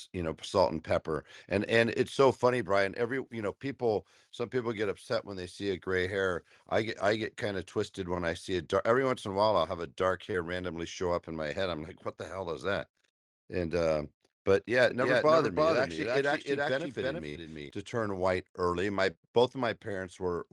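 At 10.31 to 10.35 s, between "I'll have a dark" and "randomly show up in", a short concealed packet loss leaves a brief smear where about 20 ms never arrived and was patched from the preceding sound. On a spectrogram the harmonics briefly stretch flat.

From 14.9 to 17.7 s a doubled audio track appears: a second full-band copy, roughly 5 dB quieter, trails by about 0.3 s, likely from a second, slower capture path. The waveform shows a dry repeated envelope that begins and ends abruptly, with no reverberant tail.

At 17.29 to 17.37 s, just before "to turn white early", a burst of packet loss replaces about 60 ms with a held, fading continuation of the last sound. A spectrogram shows frozen, dimming bands, then a jump as the audio resumes later.

A second short concealed loss at 19.11 to 19.17 s, after "turn white early my", bridges about 40 ms with a brief wobble and smoothed-over detail.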